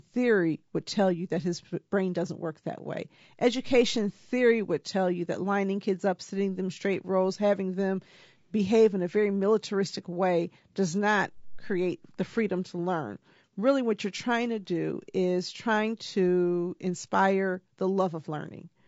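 The speech here is rough and grainy from start to finish, with the fine structure of the voice smeared and a kind of noisy fill between the harmonics, plus a top end that sounds a bit synthetic. That's likely low-delay AAC compression, the AAC-ELD flavour used for video calls. Its short frames can't pin down pitch harmonics cleanly, and at a rate that fits something around 32 kbps the damage is plainly audible.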